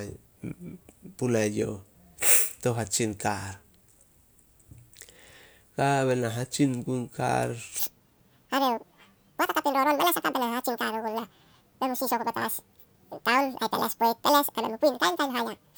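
From 7.79 s, right after "na hatsin gun kar", to the end, the audio is read two samples at a time (double speed): pairs become single frames, giving 2x speed and an octave higher pitch.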